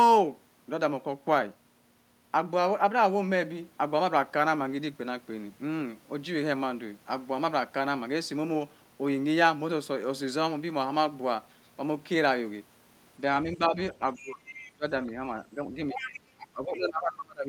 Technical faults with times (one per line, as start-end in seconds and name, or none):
13.56-14.45 speech suppressed in double talk
14.14-14.72 other side's voice leaking through
14.72-14.84 speech suppressed in double talk
15.51-17.48 speech suppressed in double talk
15.90-16.18 other side's voice leaking through